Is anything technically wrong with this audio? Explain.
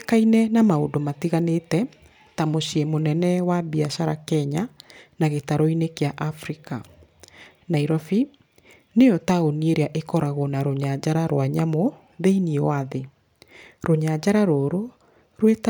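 No, nothing technically wrong stood out on listening to this speech recording.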